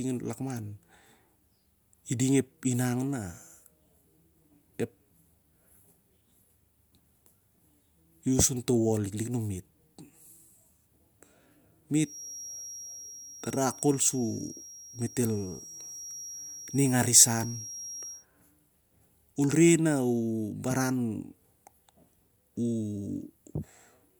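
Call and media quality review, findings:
Feedback whistle, 11.99 to 18.26 s: thin steady tone near 5.7 kHz under the speech, roughly 15 dB down, level swelling and fading slowly. Likely speaker-to-mic acoustic loop held at the edge of feedback, one frequency sustaining without runaway.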